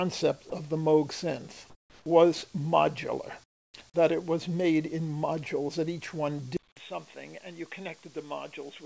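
Sound dropped by the voice detector at 0.50 s: a 20 ms slice of sound briefly gives way to steady synthetic noise before the signal resumes. The sender's voice detector likely judged this moment to be background and stopped transmitting, so the receiver filled the gap with comfort noise.

Comfort noise in place of the background occurs at 1.70 to 2.06 s and at 3.44 to 3.74 s. In these pauses the real background, which sits about 33 to 34 dB below the loudest sound, is replaced by a flat, featureless hiss. That hiss is about 5 dB quieter in the first pause and about 25 dB quieter in the second. This is likely discontinuous transmission, with the receiver synthesising noise while nothing was sent.

An input switched to a poorer device occurs at 6.57 s and lasts to the end. After a 200 ms silence, the sound turns dull and boxy, with nothing above 3.8 kHz, whereas the call path's G.722 coding had carried content up to 8 kHz. 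The level drops by roughly 10 dB, and a new noise floor sits roughly 40 dB below the signal. This likely reflects a change to a narrower-band microphone or a headset call profile.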